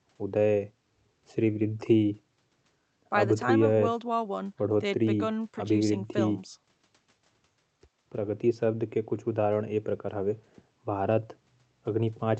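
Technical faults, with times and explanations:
Nothing goes wrong anywhere in this one; the speech simply comes through the way a call does, with the top end stopping at 8 kHz, which fits an Opus link running at around 32 kbps.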